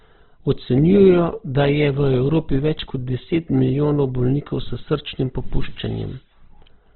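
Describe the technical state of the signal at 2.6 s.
At 2.6 s, as throughout, the speech is grainy and rough, with nothing above 4.2 kHz. This is likely Opus compression at around 12 kbps: starved bands get noise-filled rather than emptied, so there is less MP3-style swirl.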